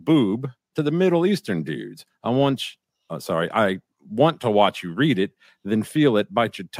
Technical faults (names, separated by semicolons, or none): none